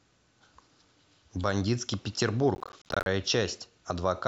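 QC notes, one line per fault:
2.55 to 3.06 s, processor overload crackle: a gritty, tearing burst of crackle rides over the speech for about half a second and then stops cleanly. The audio is chopped by many tiny dropouts to silence, each with hard edges, spaced in a way that fits buffers of around 10 ms. Roughly thirty of them are missed in that stretch, because the processor could not finish them in time while the load lasted.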